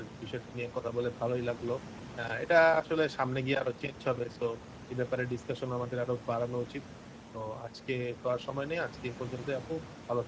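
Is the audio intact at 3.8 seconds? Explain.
No. At 3.8 seconds, as across the whole clip, the speech carries Speex codec damage. This CELP coder has too few bits for the excitation signal that models the voice, so the speech comes out noisy and hoarse, with a plainly audible coarseness. The band above 4 kHz, up to the 8 kHz edge, is only shaped noise-like fill. This fits a middle Speex wideband setting of around 17 kbps. The room noise, about 13 dB below the speech, sits underneath.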